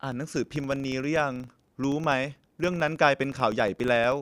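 A speech recording with a filter restarted on every block: a 25 Hz buzz runs throughout, tracking the speech level, consistent with 40 ms blocks each starting from a reset filter state.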